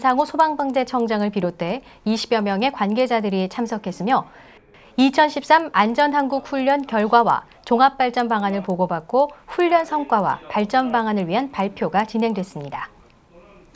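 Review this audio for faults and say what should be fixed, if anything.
A resampler restarted on every block runs through the whole clip as a steady train of ticks at 10 Hz, one every 100 ms. Each 100 ms block was converted in isolation, so at each block edge the filter lacked the real neighbouring samples and worked from silence or the block's own opposite end. That leaves a small error at every boundary, heard as a periodic tick wherever sound is present. The behaviour fits a conversion from 48 kHz to 16 kHz. To prevent it, run the resampler as one continuous stream and carry its filter state and history across block boundaries.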